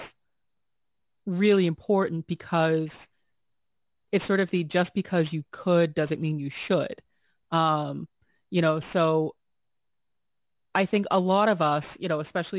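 Throughout the clip, aliasing is present: the audio was brought down to a much lower sample rate without an anti-aliasing filter first removing content above the new Nyquist limit. The fold point sits at 4 kHz, which points to an 8 kHz rate, so energy that belonged above it is mirrored back down to unrelated frequencies below. Those false components, roughly 20 dB under the speech, give sibilants a gritty, metallic edge, with the spectrum running right up to the band edge.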